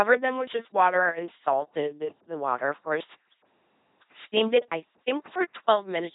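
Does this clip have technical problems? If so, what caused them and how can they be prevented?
Yes. An LPC-10 vocoder runs through the whole clip. It gives a buzzy, robotic voice with nothing above 3.8 kHz, which fits the 2.4 kbit/s military codec. Unlike ordinary low-bitrate clipping or muffling, each moment switches wholly between pulse-like buzz and noise. To prevent it, send speech over a modern wideband codec instead of LPC-10.

A DC step at 1.19 s, between "them with just water" and "salted the water of", is heard as a single low thump. The speech carries on unchanged, and the offset dies away through a 20 Hz high-pass rather than holding. That sets it apart from a dropout or a click inside the speech itself. To prevent it, stop converters recalibrating and inputs with an offset being switched in mid-recording, and keep a DC-blocking high-pass in the chain.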